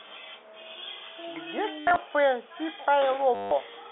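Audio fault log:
1.80–1.96 s and 3.35–3.51 s, packet loss with last packet repeated: the same short block replays over gaps (scattered in the first, longest run 70 ms; solid 160 ms in the second), buzzing near 100 Hz, which fits 10 ms packets. The spectrogram shows frozen bands cut by evenly spaced vertical stripes, and the waveform shows one chunk repeating.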